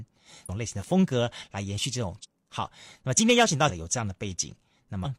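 Damaged data in the compressed speech stream makes the decoder misread frames and lose sync, producing brief chirps or blips at 0.45–0.49, 2.20–2.26, 3.65–3.71 and 5.01–5.07 s.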